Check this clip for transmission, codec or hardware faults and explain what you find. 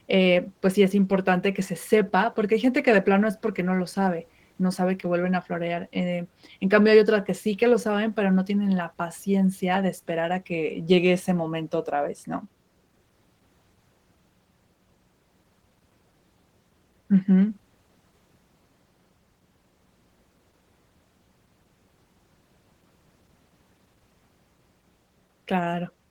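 One codec fault is present, across the whole clip. Opus voice compression is audible throughout. It codes the lows by prediction and the highs by transform. Coarse excitation, fitting a low bitrate near 16 kbps, sounds hoarse and slightly robotic.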